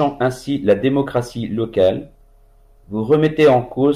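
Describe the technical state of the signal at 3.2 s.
At 3.2 s the speech signal is intact, with no audible technical fault.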